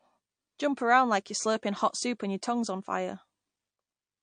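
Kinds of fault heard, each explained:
Low-bitrate audio saved at a high bitrate: the speech was likely encoded first as a low-bitrate MP3 and then re-saved as a much higher-bitrate MP3. The second pass cannot restore what the first discarded. Throughout the clip the speech keeps the coding artefacts of the earlier encode, which fits about 48 kbit/s, while the later encode, which points to 256 kbit/s, adds almost nothing of its own.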